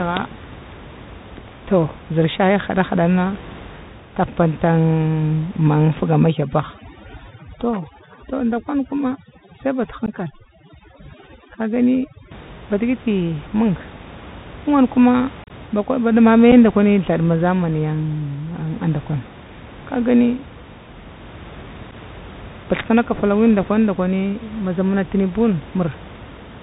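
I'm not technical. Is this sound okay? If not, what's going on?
No. The whole recording went through a Bluetooth CVSD headset codec, a phone-call format that cuts off all sound above 4 kHz. The speech sounds muffled, with scratchy s sounds and a grainy hiss underneath.

From 6.17 to 12.31 s there is overdone noise removal. A noise filter was set too strong, so the background drops away and breaks up into twinkling specks.

There is also unconcealed Bluetooth headset packet loss. Bits of sound sent from the headset never arrived, and silence or a filler pattern replaced them. You hear short, sharp gaps at 10.06 to 10.10 s, at 16.52 s, and at 21.91 to 21.93 s. Between 15.44 and 15.51 s several gaps cluster together and sound choppy.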